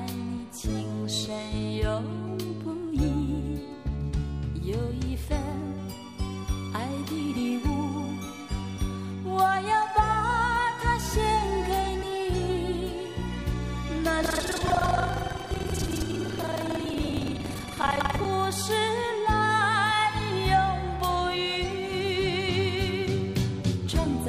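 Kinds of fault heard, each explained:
Buffer tearing: the writing program and the hardware have slipped out of step on the ring buffer, so each period splices in audio from about a fifth of a second earlier, with hard joins. From 14.21 to 18.26 s this rattles as a 21.5 Hz buzz, which fits a 2048-sample buffer.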